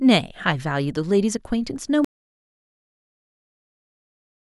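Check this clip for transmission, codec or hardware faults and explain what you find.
One fault is present: an audio dropout to silence. At 2.05 s the speech stops abruptly, mid-flow, and silence runs to the end of the clip. There is no room tone or noise floor in the gap. Nothing fades out. The input was likely lost, through a disconnected device, a failed link or a mute, while the recorder kept writing silence. Whatever was said after 2.05 s is missing.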